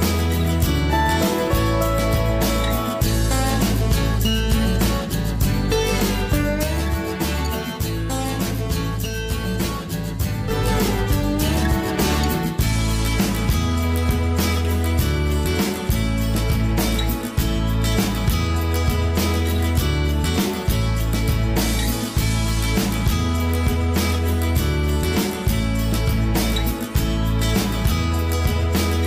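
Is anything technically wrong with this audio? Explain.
Yes. From 6.63 to 10.51 s there is channel delay (comb filtering): one channel lags the other by roughly 10 ms, and when the two are summed to mono the shared content cancels at regularly spaced frequencies, starting low, around 40 Hz, and repeating up the spectrum. The sound turns hollow and phasey. Unlike a flanger, the notches stay fixed rather than sweeping.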